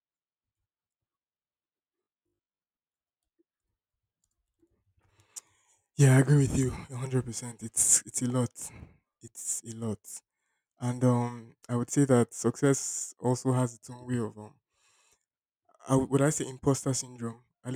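Speech, with robotic sound from repeated short buffers between 2.04 and 2.70 s: the voice collapses into a rigid 50 Hz metallic buzz. Likely cause: audio arriving too seldom, so roughly half the time is filled by replaying a 20 ms buffer.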